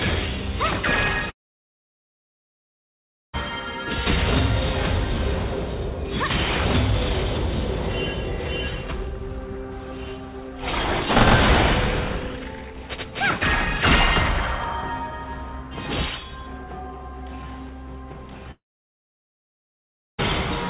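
From 1.3 to 3.35 s, and again from 18.51 to 20.2 s, the sound trails off into a short fading buzz. It then goes silent for roughly 2 s and 1.6 s, and comes back with that stretch simply gone. That's likely a long network dropout.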